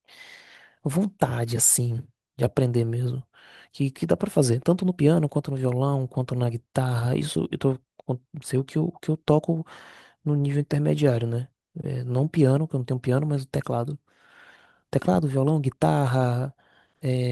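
Speech with clock drift between sender and receiver running for its whole length: the sender's clock is roughly 4 percent fast, so the receiving jitter buffer keeps overfilling and has to shed audio to keep latency in check. That shows up as repeated timing corrections from 0.01 s to 17.3 s, where the receiver trims short slices to consume the stream at 104 percent speed. The result is faint hiccups and a slightly hurried, uneven pace. On a waveform the cuts appear as small splices where a cycle jumps abruptly. On a spectrogram they appear as scattered thin vertical seams or brief broadband ticks, irregularly spaced across the clip.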